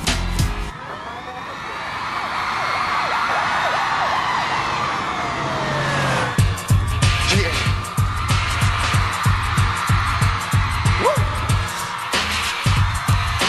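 At 2.67 to 2.73 s the sound stutters: a 60 ms stretch plays, then immediately plays again once, so that moment jumps back briefly. This is repeated frames, a run of compressed frames, probably three judging by the length, written or sent twice, which lengthens the audio by 60 ms.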